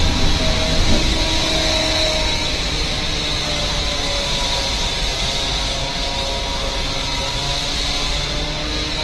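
The audio was likely passed through one lossy codec and then re-encoded by another, which fits a low-rate Opus encode followed by HE-AAC at around 32 kbit/s. From start to end, the different artefacts of both codecs are heard together, and nothing remains above 13.1 kHz.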